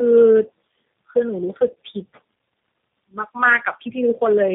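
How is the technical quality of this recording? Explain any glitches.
Poor, with one fault running throughout. Tandem speech coding: the call passed through three speech codecs in a row, each re-coding the last one's degraded output, leaving speech rough, muffled and warbly, with nothing above 3.7 kHz.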